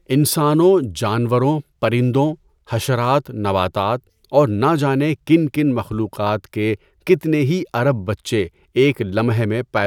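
No faults register anywhere in this speech recording.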